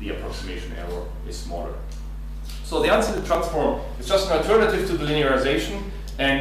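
Processor overload crackle from 3.09 to 3.35 s in this audio: about five buffers of around 10 ms miss their deadlines and repeat old audio, causing gritty tearing.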